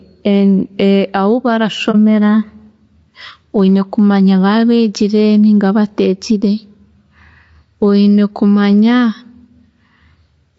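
Throughout the speech, loud and soft parts are squashed closer in level, with the gain swinging around 10 dB. This is gain pumping, likely from a fast limiter clamping an input set far too hot.

Also throughout, the voice sounds rough and grainy, with noise between harmonics and a synthetic-sounding top band. This is low-delay AAC compression, whose short AAC-ELD frames at a bitrate that points to about 32 kbps smear the pitch detail.

From 1.91 to 1.95 s, the sound briefly dips for 30 ms. This is AAC frame loss with muting: a lost frame was replaced by silence, and the overlapping windows smoothed its edges.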